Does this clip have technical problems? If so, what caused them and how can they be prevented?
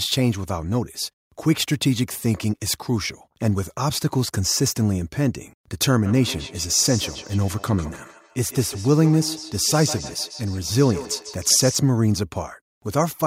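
Yes. From 6.05 s to 11.82 s the speech has feedback echo between two devices: each stretch returns after a fixed gap of around 150 ms, at its loudest about 13 dB below the direct speech, with a thinner, ringing tone. Unlike room reverberation, which is a smooth decaying wash, this repeat arrives as a distinct copy at a steady interval. One device's microphone is catching another's loudspeaker, and neither echo canceller removes it. Prevent it by joining from one device per room, or muting the others' microphones and speakers.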